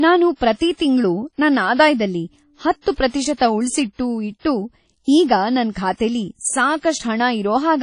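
From start to finish the speech sounds washy and ringing, with a hiss that breathes with the signal and nothing above 10.1 kHz. The likely cause is WMA compression, its quantisation noise smeared across long blocks, which fits a bitrate near 32 kbps.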